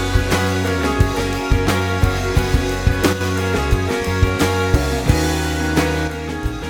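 One channel drops out at 3.13 to 3.21 s and again from 6.08 s to the end: the music abruptly falls about 6 dB and is otherwise unchanged, likely because one stereo channel was lost before the mono sum.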